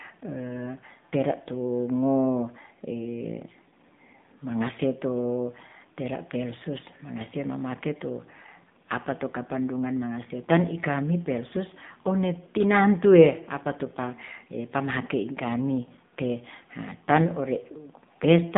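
Throughout the speech, an AMR narrowband mobile codec limits the band to roughly 150 Hz to 3.7 kHz and resynthesises the voice from a coarse vocal-tract model. Damage is plainly audible: thin, buzzy, somewhat synthetic speech, which fits a low bitrate near 7.4 kbps.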